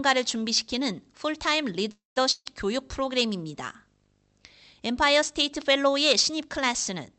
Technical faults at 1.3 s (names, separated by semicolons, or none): video or display buzz